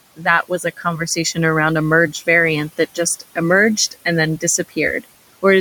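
Between 0.43 and 1.0 s, just before "around a merged variant", the noise suppressor mistakes parts of the speech for noise and turns them down by up to about 11 dB, roughly a tenth of a second in all. Unlike a dropout, nothing falls fully silent. The quiet sounds turn faint and swallowed together with the room noise, which sits about 21 dB below the speech.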